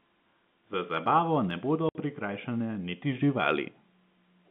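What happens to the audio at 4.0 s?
Nothing goes wrong at 4.0 s: the speech continues intact through that moment, still carrying the narrow telephone band of the G.711 line.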